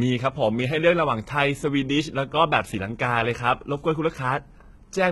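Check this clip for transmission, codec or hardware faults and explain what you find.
There's one fault, and it runs through the whole speech clip: what sounds like HE-AAC compression, heavy here. Nothing gets through above about 11.8 kHz. The treble that is there is likely rebuilt by spectral band replication, with lower bands copied upward and shaped by a rough envelope instead of being coded properly. That leaves the harmonics mismatched across the crossover, so the s sounds come out gritty and lispy. The damage fits a low bitrate, around 16 kbps.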